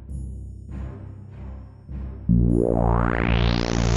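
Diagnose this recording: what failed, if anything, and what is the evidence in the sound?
Nothing failed: no stage in the chain, from wiring through conversion, buffering, processing, transport and playback, leaves any audible trace of a fault in this recording.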